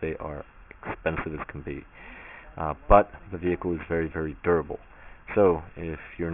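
Aliasing runs through the whole clip, from the first moment to the last. The audio was brought down to a much lower sample rate without first removing the content above the new limit, and the band edge near 3 kHz points to a rate of about 6 kHz. Everything that lay above that edge folds back down as false, unrelated tones, at roughly 15 dB below the signal. The result is gritty, metallic hash crowding up against the 3 kHz ceiling.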